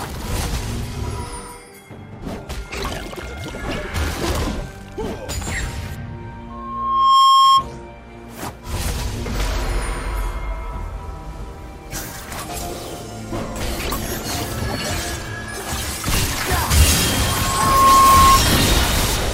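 Loudspeaker feedback squeal appears from 6.50 to 7.66 s and again from 17.08 to 18.43 s. A microphone hears its own loudspeaker, and the loop runs away at 1.1 kHz. A pure tone swells in under a second to about 10 dB over the sound.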